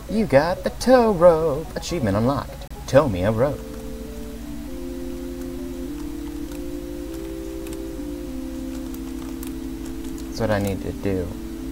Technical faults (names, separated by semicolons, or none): Bluetooth stall